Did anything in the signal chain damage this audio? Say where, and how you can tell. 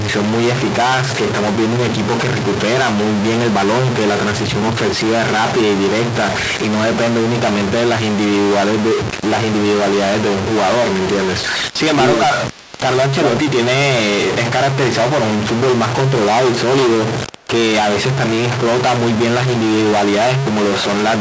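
Yes. A stuck bit, likely at the converter or its data lines, runs through the whole clip. It adds distortion to the speech, and the pauses fill with noise instead of going quiet, because the fixed bit offsets about half the samples and flips around zero.

An echo leak from the call processing stage, likely a far-end loudspeaker whose echo canceller let residue through, puts a faint copy of the speech 472 ms late at 12.5 to 12.8 s and at 17.37 s. It sits roughly 25 dB down, then about 35 dB down. The call's band limit at 8 kHz is expected.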